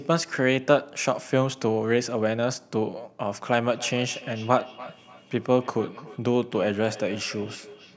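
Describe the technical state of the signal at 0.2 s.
At 0.2 s the speech is intact, carried through ordinary call microphone processing with its bass trimmed and nothing above 8 kHz, and no fault is present at that moment.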